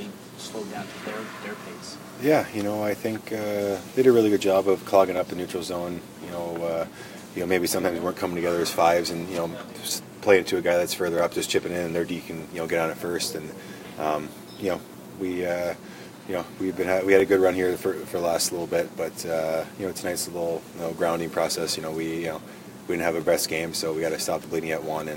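At 5.17, 11.19, 17.20 and 23.21 s, overlapping chunks produce a brief stutter. Each 6-second chunk starts 13 ms before the previous one ends, so that sliver plays twice. Unlike a dropout, nothing is lost: the click comes from repetition, evenly spaced.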